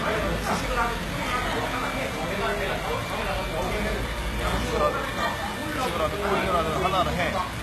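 The audio was likely squeezed through HE-AAC compression at a very low rate, which fits a bitrate around 16 kbps, and the damage runs through the whole clip. The codec kept only the lower spectrum and synthesised the treble by copying lower bands upward under a coarse envelope, so the top end sounds false, with a gritty, metallic sheen where its harmonics fail to line up, and nothing at all above 12.3 kHz.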